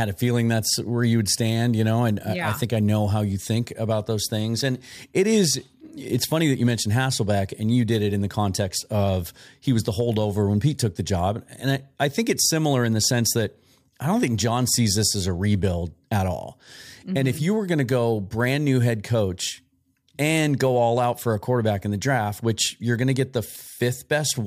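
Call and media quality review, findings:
No technical faults found in the signal path; the speech is consistent throughout, with no dropouts, distortion, or timing disturbances to report.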